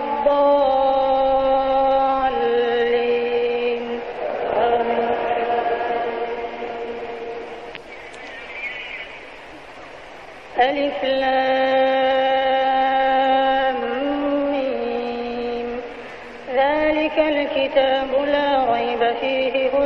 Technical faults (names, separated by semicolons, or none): none